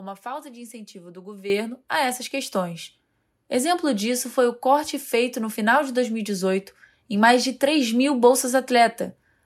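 At 1.5 s the microphone volume stepped up: the call software judged the input too quiet and raised the device gain by about 11 dB in a single step. Speech and background noise jump louder together at that instant, with no gradual ramp.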